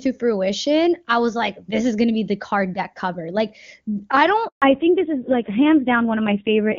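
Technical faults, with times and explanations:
4.48–4.62 s, handover gap: the call switches networks and 140 ms of speech never arrives, so the sound fades quickly into silence, a flat blank strip on the waveform.
4.62 s onward, fallback to narrowband: HD Voice drops to an older narrowband codec, which fits a low rate near 5.9 kbit/s. Everything above 4 kHz disappears, leaving a hard ceiling on the spectrogram and duller, rougher speech.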